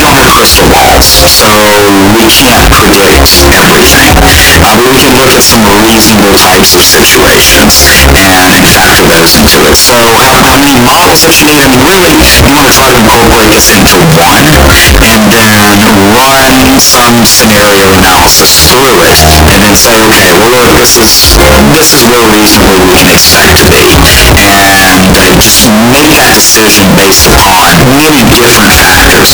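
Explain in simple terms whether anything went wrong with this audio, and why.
Something went wrong, and it lasts from the very start to the very end. The sound is loud and harsh the whole way through. Soft sounds are just as loud as the busy parts. The likely cause is signed and unsigned mixed up. The samples use 8 bits each. If their top bit is read the wrong way, every point where the wave crosses the middle jumps from one extreme to the other. That jump is the grinding roughness you hear.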